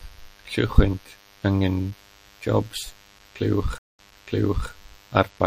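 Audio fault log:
Throughout, MP3 compression: the speech has plainly audible codec damage, with dulled treble and a watery, swirling texture on sibilants. The likely cause is a lossy encoder starved of bits, consistent with about 64 kbps, cutting high frequencies and letting weak spectral lines flicker between frames.
3.78 to 4.70 s, stream reconnect: the audio drops into about 200 ms of silence, then resumes 0.72 s earlier, so a stretch of speech is heard twice. The link broke, the player reconnected, and a fresh decoder restarted from a resent burst of older data.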